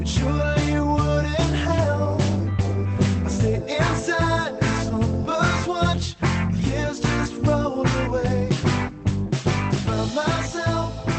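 No technical faults can be heard in the audio. It went through a WebRTC call path that is working normally, and its high frequencies stop at about 8 kHz, which fits the bandwidth limit of the call codec.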